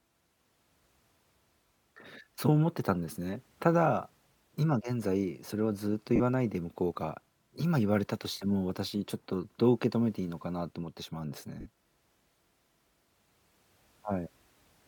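Lost LE Audio frames occur at 6.16 s (40 ms) and 11.61 s (50 ms). The decoder refills each gap with the last spectrum, giving a brief noisy smear over the speech.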